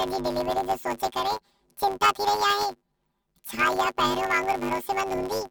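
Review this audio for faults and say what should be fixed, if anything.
A robotic buzz at 100 Hz runs through the whole speech clip: planar audio read as interleaved, each 10 ms block of left-then-right samples played as alternating pairs. Prevent it by declaring the planar sample layout correctly, or converting to interleaved before playback.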